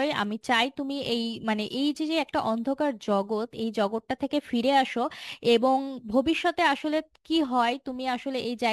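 A speech clip with crude rate conversion running the whole way through. There's a gritty, inharmonic fizz riding on the louder and brighter parts of the voice, sitting only around 25 dB under the speech. It sounds like samples were simply repeated to stretch the rate, which fits a 44.1 kHz to 48 kHz change, with no filtering, so the repeating error pattern throws off tones unrelated to the speech.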